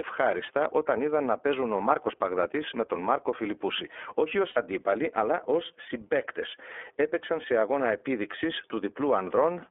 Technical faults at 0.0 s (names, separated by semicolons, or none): iLBC codec